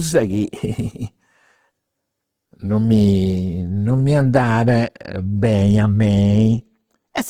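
Throughout the speech, the sound is rough and grainy, with tonal parts turned noisy, yet the band still extends to about 20.2 kHz. This is likely Opus compression in its music mode, filling starved bands with noise, which fits roughly 16 kbps.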